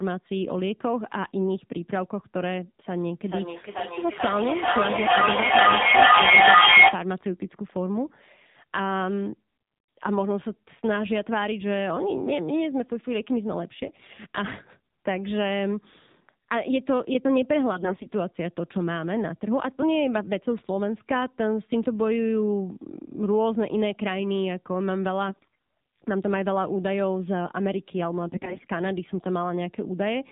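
The whole clip has gone through the AMR narrowband mobile codec at what sounds like 7.4 kbps. Everything above 4 kHz is gone, so the speech comes out muffled, and at that low rate the voice takes on a plainly audible buzzy, synthetic edge.

Then come four short bursts of AMR bit errors, at 13.86 to 14.19 s, 17.72 to 18.10 s, 25.28 to 25.47 s and 28.28 to 28.66 s. In each one, the less protected bits of the codec frames got flipped, so the pulses driving the voice model land in the wrong spots. Pitch and level roughly hold, but the voice turns hoarse and gargly. The error rate climbs from burst to burst, from around 5% up to around 15%.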